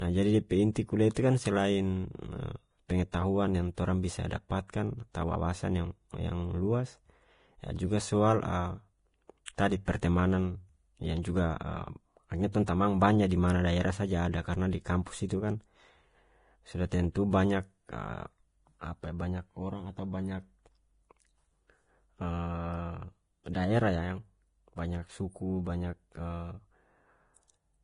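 Right from the start the speech has that hissy, grainy texture of heavy Vorbis compression. Nothing gets through above 10.5 kHz, and the treble left below that is quantised so coarsely it turns to noise, which fits a low bitrate of around 31 kbps as the likely cause.

At 9.45 to 9.48 s there's pre-echo. An attack landed late in a transform block, so quantisation noise sized for that loud onset smeared back across the quiet 24 ms before it. You hear a brief hiss ahead of a soft, blurred attack.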